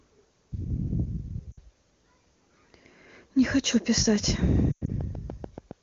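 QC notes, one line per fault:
1.51–1.59 s, lost AMR speech frames: about 60 ms drops out, which fits three 20 ms frames failing their check. The decoder fills the gap by repeating the last good pitch and vocal tract shape at falling gain, so the sound drops to near silence within two frames before the voice comes back weak or rough for a moment.
4.16–5.72 s, train of clicks: a run of roughly ten clicks at a steady 7 per second, each much the same shape, peaking around 5 dB above the sound. The regular ticking rides over everything and is likely from interference from nearby equipment or a faulty connection.
4.71–4.90 s, lost AMR speech frames: 120 ms lost, scattered over 160 ms, with the longest gap at 100 ms. That longest run is long enough for the concealment to drop to near silence, and the audio comes back weak or rough. The AMR wideband (HD Voice) codec itself adds little or no damage here, and the decay is quick, as you'd expect from wideband.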